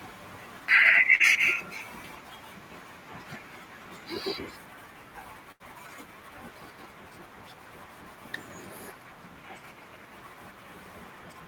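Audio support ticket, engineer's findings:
Short concealed packet loss, 1.15 to 1.23 s. Brief smear in the speech. Receiver concealment extended the previous sound for about 40 ms of late audio.

Burst of packet loss, 5.52 to 5.63 s. Held sound fading out, then speech jumps ahead. Jitter buffer lost about 80 ms consecutively; concealment faded it down.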